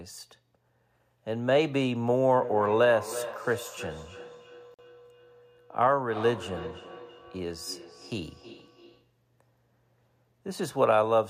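Speech with a feedback echo between two devices from 2.36 to 9.12 s: sound returns roughly every 300 ms, thin and ringing, peaking about 14 dB below the voice, as one device replays another's microphone. At 4.74 to 4.82 s, a silent gap cuts in and the sound resumes as if it had played on, likely a Bluetooth dropout from late packets.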